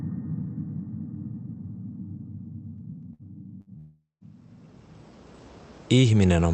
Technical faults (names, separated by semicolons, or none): CD scratch ticks; burst of packet loss; long network dropout